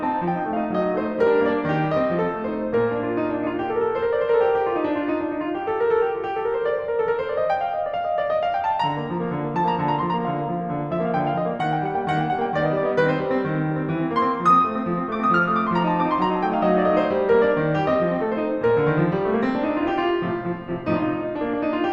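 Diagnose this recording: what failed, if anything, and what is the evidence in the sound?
Nothing in this music recording points to a failure at any stage of the signal chain. No fault of any kind can be heard anywhere in it.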